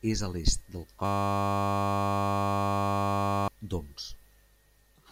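A system hang loop runs from 1.05 to 3.48 s. The system stalled while the sound hardware kept replaying one 10 ms stretch of its buffer, so the speech gives way to a steady 100 Hz buzz and about two seconds of audio is lost.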